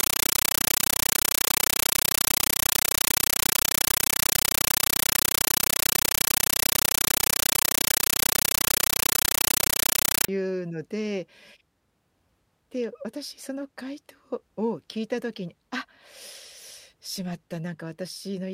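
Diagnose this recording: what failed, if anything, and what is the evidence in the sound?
From the start to 10.28 s the speech is replaced by very loud, harsh chattering static that pulses at a steady 31.25 times a second, each burst about 9.33 ms long with silence between. This is a compressed stream played as audio at the playback stage: a Dolby Digital (AC-3) bitstream on the digital link was treated as ordinary samples instead of being decoded. Each coded frame comes out as a burst of noise followed by zero padding, a pattern that fits a 448 kbps stream.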